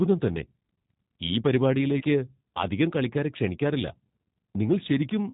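Throughout, the speech carries G.729 codec damage that is plainly audible. Nothing above 4 kHz survives, and the sound is rough and slightly synthetic because it is rebuilt from a vocal tract filter, a pitch predictor and sparse pulses, consistent with an 8 kbit/s G.729A encoder.

From 1.98 to 2.04 s, VoIP packet loss is concealed by the speech codec. About 30 ms of audio is missing, which points to three lost 10 ms frames. The decoder repeats its last pitch and filter at falling gain, so the sound smears into a brief buzzy tone or coloured noise that fades, and the voice stays weak or distorted for a while after the packets return.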